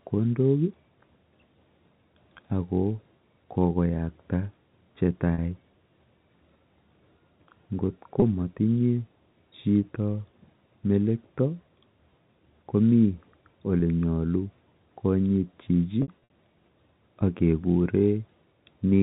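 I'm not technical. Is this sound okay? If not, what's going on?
No. The audio has packet loss with pitch repetition: small pieces went missing and were patched by repeating the last bit of sound. You can hear it at 5.34 s after "kokoyakta che", at 8.2 s, at 13.8 s just before "nyalu konyitchi", and in a scattered cluster from 16.02 to 16.30 s after "nyalu konyitchi". Unlike a plain dropout, the short gaps aren't silent. They sound like a brief buzzy hold on the sound.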